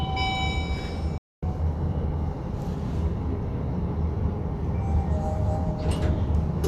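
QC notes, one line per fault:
1.18–1.43 s, playback stall: the sound cuts out mid-flow for about 246 ms, leaving dead silence, then resumes. The likely cause is the player running short of data or its output thread being blocked, so nothing reached the output until it recovered.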